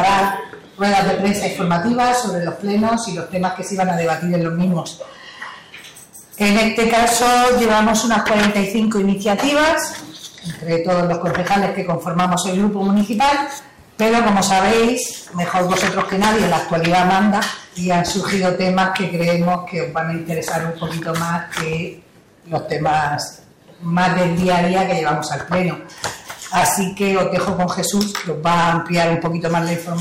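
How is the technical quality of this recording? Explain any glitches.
Poor, because of one fault. From start to finish every loud passage carries a harsh, gritty fuzz: hard clipping. The audio was driven roughly 18 dB past what a stage could pass, so peaks were sliced flat, around a tenth of all samples, and those flat tops add harmonics high up the spectrum.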